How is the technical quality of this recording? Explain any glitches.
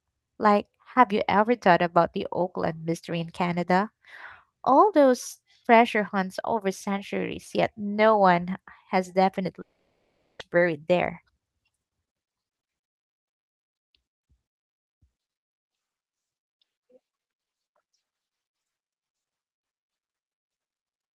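One glitch, a likely long network dropout. From 9.61 to 10.42 s, after "yet no one has", the sound decays into a fading buzz or hiss, then about 0.6 s of silence; roughly 0.78 s is lost before "buried there".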